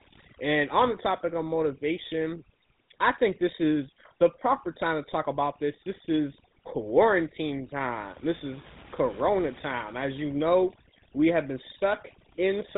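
Throughout the speech, overdone noise removal is audible: the suppressor was set too aggressively, so frequency bands near its noise estimate are pulled down or cut entirely. The background drops and breaks up into twinkling specks, and quieter parts of the voice go with it.

The whole clip also carries the sound of the GSM full-rate codec, with plainly audible damage. Nothing passes above 3.8 kHz, and the pulse-driven vocal-tract model gives the voice a buzzy, gravelly roughness, which fits the 13 kbps full-rate mode.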